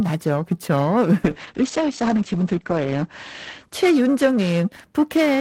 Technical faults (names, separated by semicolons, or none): periodic clock jitter; call bitrate drop